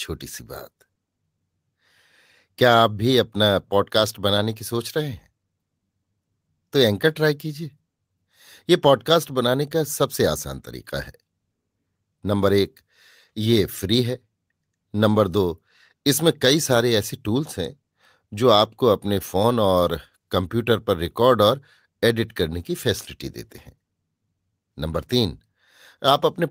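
Nothing in this bit of speech stands out as a technical problem; it just runs along without anything going wrong that a listener would catch.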